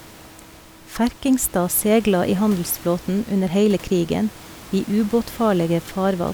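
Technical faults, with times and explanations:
No technical faults are present in this speech clip.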